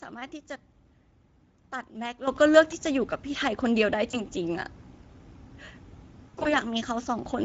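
Speex codec artefacts run through the whole clip: the speech sounds noisy and hoarse, with a grainy edge. The CELP coder is short of bits to describe the excitation, a level of damage that fits a bitrate of around 16.8 kbps.

A sudden gain jump at 2.28 s lifts the speech and its background noise together by about 12 dB, and the louder level holds to the end. The change lands on a single sample with no ramp, most likely from a gain setting or bit shift applied abruptly.

VoIP packet loss concealed by the speech codec appears twice. From 4.11 to 4.24 s, a gap consistent with one lost 20 ms frame is filled by a stretched continuation that fades. The decoder repeats its last pitch and filter, and the voice stays thin briefly after audio resumes. From 6.29 to 6.56 s, heavier loss of about 100 ms, scattered over 160 ms in runs up to 40 ms, produces repeated stretched, fading fills. Because each frame builds on the last, the speech stays weak or distorted beyond the gaps.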